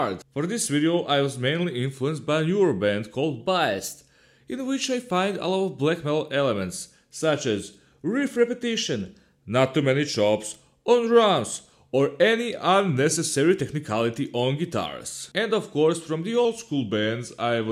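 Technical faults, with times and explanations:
3.40–4.00 s and 8.83–9.41 s, drift correction step: a clock-matching resampler likely jumped its rate 6.3% faster, so speed and pitch rise together by about a semitone (106 cents), then snap back.
12.56–13.36 s and 16.45–17.71 s, drift correction step: the rate likely dropped 6.3% in one step, slowing the sound and detuning it down about 113 cents. The last step runs to the end of the clip.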